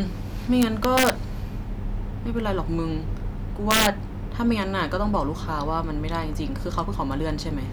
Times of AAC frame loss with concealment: none

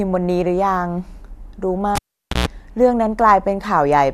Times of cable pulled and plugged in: 1.95-2.48

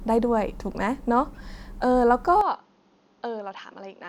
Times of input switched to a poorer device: 2.41-4.09

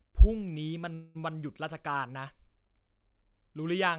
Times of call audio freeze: 0.94-1.31

